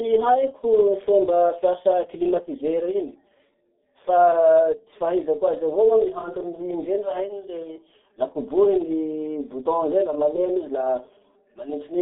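From start to finish, the speech has been through the G.723.1 codec, an old internet-telephony coder. Everything sits between about 200 Hz and 3.6 kHz, so it's muffled and boxy, with nothing bright up top. The coder squeezes the voice into 30 ms frames at a very low rate, consistent with roughly 6.3 kbit/s, and its voice model lags behind quick changes. That gives the heavy, hoarse graininess you hear and smears the consonants together.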